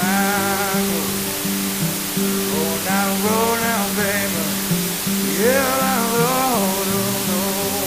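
Low bit depth with dither runs throughout: the audio is reduced to about 3 bits, and dither turns the rounding error into steady, even hiss roughly as loud as the sound itself.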